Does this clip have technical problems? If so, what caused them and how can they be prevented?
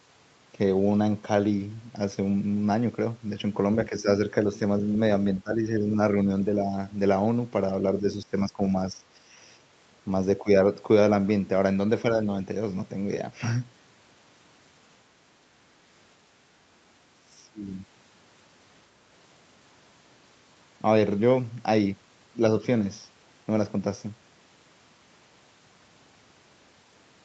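Yes. The speech sinks in level, by about 10 to 20 dB, at 3.89–4.07 s, 5.42–5.97 s, 8.0–9.02 s, 10.42–10.48 s and 17.21–17.6 s. This is likely speech suppressed in double talk: with both sides talking, the echo canceller mistook this talker for loudspeaker echo and attenuated it. Tuning the echo canceller for double talk, or using a headset, prevents this.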